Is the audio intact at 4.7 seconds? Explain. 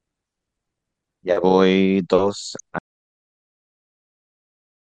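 No. At 4.7 seconds the clip is in an audio dropout to silence that begins at 2.79 s and runs to the end. The speech cuts off mid-flow and is replaced by silence, with no room tone, hiss or reverb tail. That separates it from a fade, a pause in talking or a noise gate, which would leave some background. The likely cause is a lost input, such as a dropped device or link, while recording carried on writing empty samples.

MP2 compression spans the whole clip, 4.7 s included, though it can only be heard before the dropout. The speech sounds dull, with a gurgling, granular roughness. MPEG Layer II divides the signal into 32 sub-bands and gives each a share of bits. The damage here is plain enough to point to a low rate, around 80 kbps, which is likely too little to keep the upper bands. Those bands switch off and flicker, and the remaining ones are coarsely quantised. The distortion is a warbling band-by-band graininess.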